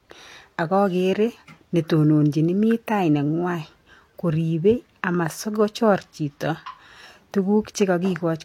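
Right from the start and all the way through, the speech carries a layered quality, with different kinds of codec artefacts heard together, and nothing at all above 16.6 kHz. That mix points to transcoding between lossy codecs, most likely a low-rate HE-AAC encode, around 40 kbit/s, re-encoded to Vorbis. Vorbis wastes bits preserving the earlier damage while adding its own, and the lowest cut-off in the chain carries through.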